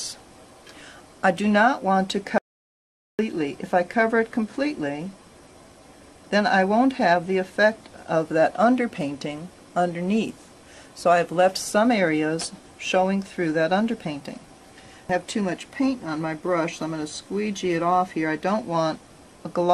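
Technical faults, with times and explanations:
2.38 to 3.19 s, audio dropout to silence: the sound cuts to silence with no room tone for about 0.81 s, likely from a lost input while recording continued.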